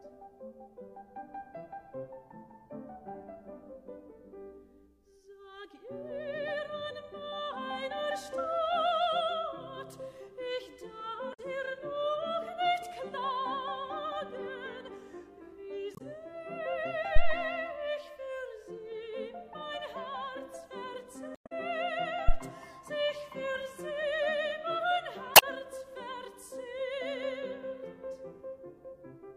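At 11.30 to 11.39 s and again at 15.92 to 16.01 s, short squawking blips mark damaged data in a compressed stream. Corrupted frames make the decoder misread the bitstream and lose sync until it finds the next frame header. At 17.16 to 17.38 s a deep phantom power thump appears: a supply switching on a live input sends a low step through the coupling capacitors, dying away in about 49 ms. Unlike the codec faults, it is a low-frequency pulse with no chirpy, garbled texture. The stream damage returns at 21.32 to 21.52 s, this time adding 52 ms to the timeline as the decoder resynchronises. A second, shorter thump follows at 22.29 to 22.35 s, decaying in about 15 ms. A final corrupted-frame chirp sounds at 25.32 to 25.43 s.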